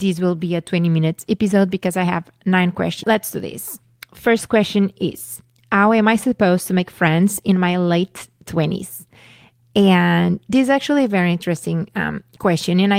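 Speech with a skip ahead at 3.03 s, right after "because I have nine". Around a second of audio is missing, and the two sides are butted together with no fill. On a spectrogram this shows as an abrupt vertical seam where formant tracks break without any silent gap. It points to audio dropped in transit or discarded by an overflowing jitter buffer. There are two bursts of jitter buffer speed-up, from 3.83 s to 5.05 s at 109 % and from 5.45 s to 8.04 s at 107 %. The receiver trimmed pitch-period-sized pieces, roughly a tenth and a fifth of a second in total, to cut excess delay. The speech sounds hurried but keeps its pitch, so harmonic spacing stays unchanged on a spectrogram while syllables appear horizontally compressed.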